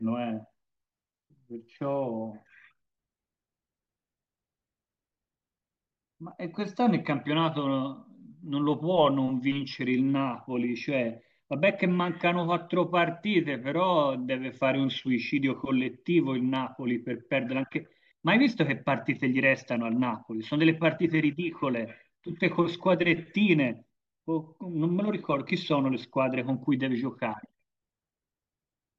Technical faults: none

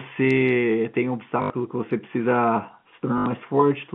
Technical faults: packet loss with last packet repeated

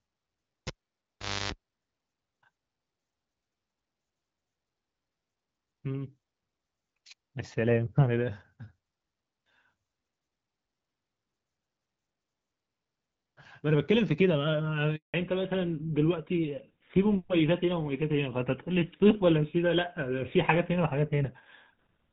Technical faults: cable pulled and plugged in; handover gap; fallback to narrowband

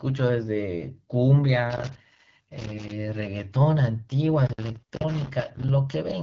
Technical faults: AMR wideband (HD Voice) codec; loose connector crackle

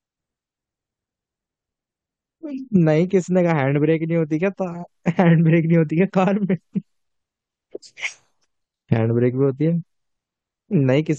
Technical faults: none

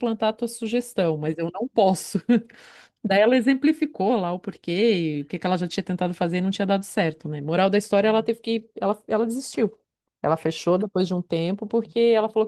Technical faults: none

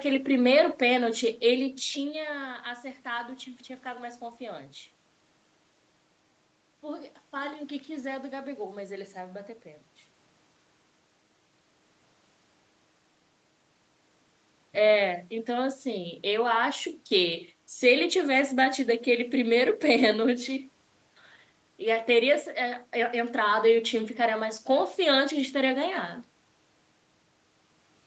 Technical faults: none

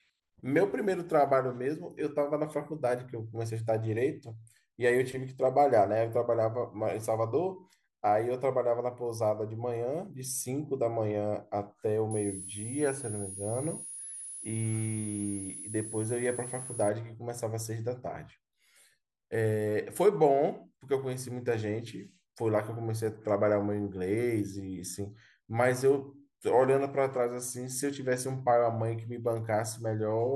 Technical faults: switching supply whistle

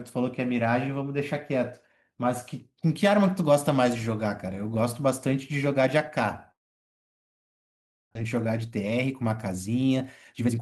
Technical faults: long network dropout; jitter buffer speed-up

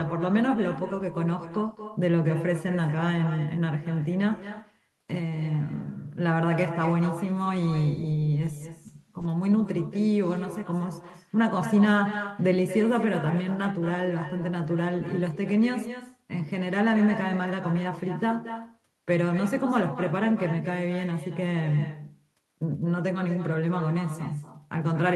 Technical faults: echo with no canceller

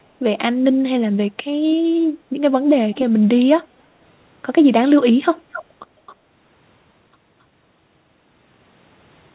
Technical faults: echo leak

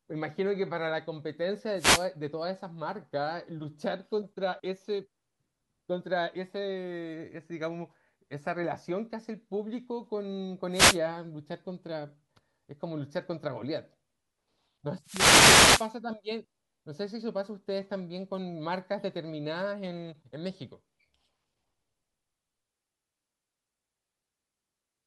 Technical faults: wireless microphone noise hit

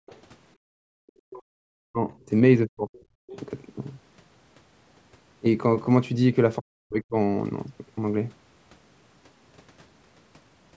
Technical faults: background gated by the echo canceller; other side's voice leaking through; speech suppressed in double talk

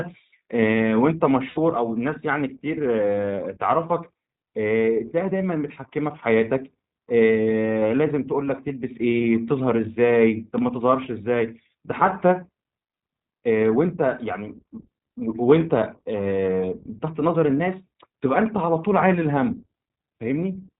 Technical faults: iLBC codec; lost iLBC frames

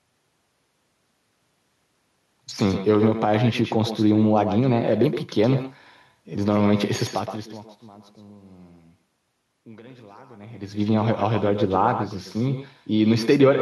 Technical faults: echo with no canceller

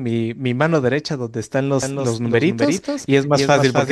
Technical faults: doubled audio track

